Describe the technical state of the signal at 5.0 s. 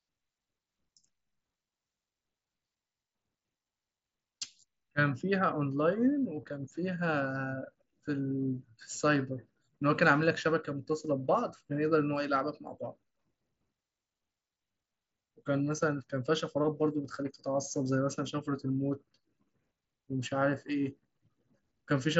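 At 5.0 s the speech comes through the Bluetooth mSBC headset codec intact, with no fault present at that moment.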